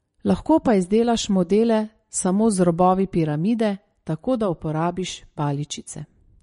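Throughout, the speech sounds watery and swirly with nothing above 10.6 kHz, likely MP3 compression at a low bitrate, roughly 40 kbps, starving weak frequency lines.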